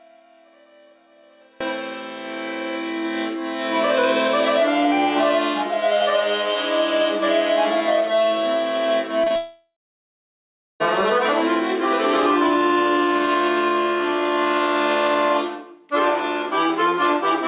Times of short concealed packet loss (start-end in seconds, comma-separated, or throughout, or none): 9.24-9.32